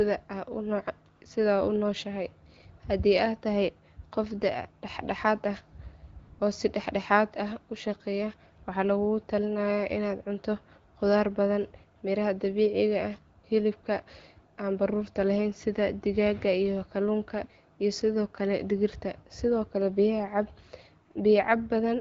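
The phone's voice activity detection judged the talker silent and stopped sending speech frames, so the receiver filled each gap with AMR comfort noise: 1.15–1.21 s, 6.19–6.39 s, 13.39–13.43 s, 13.81–13.83 s, 14.55–14.57 s and 21.11–21.15 s. The real background briefly gives way to smooth, steady synthetic hiss that switches in and out.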